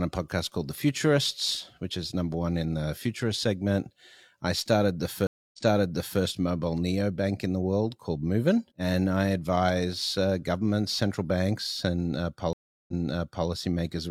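Stream reconnects hit at 5.27 s, after "segment I started the", and 12.53 s, after "governments central banks and". The connection drops, leaving about 0.26 and 0.35 s of silence, then a fresh decoder resumes the speech roughly 0.7 and 0.6 s earlier, so a bit gets replayed.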